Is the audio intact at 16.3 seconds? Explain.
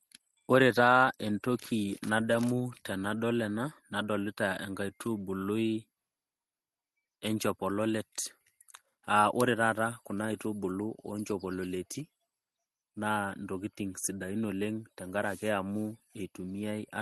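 Yes, at 16.3 s the speech is intact, with no dropout, glitch or other fault; it carries only the ordinary coding character of the call path it travelled through.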